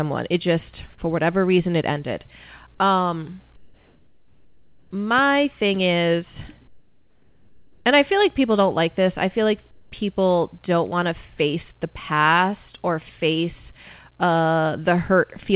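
Comfort noise in place of the background fills three pauses: 3.56 to 4.91 s, just before "my thing is"; 6.68 to 7.85 s, between "my thing is" and "and I feel like"; and 9.71 to 9.92 s, before "people don't want to". Each time the real room tone gives way to a smoother hiss, about 5, 7 and 5 dB quieter respectively. This is likely synthetic noise generated while the sender's voice detector paused transmission. On a spectrogram these stretches show an even, textureless floor, cut off at 4 kHz like the rest of the call audio. In the waveform the noise floor visibly steps down, then returns when speech resumes.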